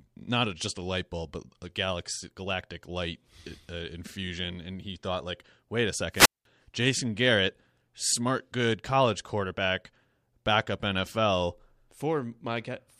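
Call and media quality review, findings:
Wireless microphone squelch dropout, 6.12 to 6.45 s, right after "thought like wait a". A brief rise of hiss or static, then a hole of near silence lasting about 200 ms, then the speech returns. Probable component: analogue FM radio link and receiver. Mechanism: the RF signal faded below the receiver's squelch threshold, so the receiver muted its output until the signal recovered.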